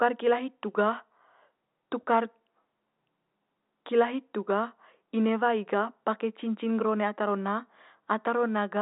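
No technical faults can be heard in this speech, which comes through a G.711 telephone channel with nothing above 3.8 kHz.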